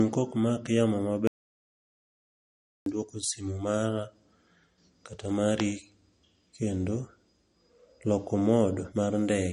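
From the start and right through the speech, everything above 10.6 kHz is gone and the sound has a plainly audible watery, swirly texture with smeared edges. That points to MP3 compression, likely at a low rate, something that fits around 40 kbps.

Then at 1.27 s, just after "kok mak yamo", the audio drops out to silence with no room tone, until 2.86 s when it picks up again at "dwoko simu mara". That's about 1.6 s simply missing, likely because the input vanished while zeros kept being written.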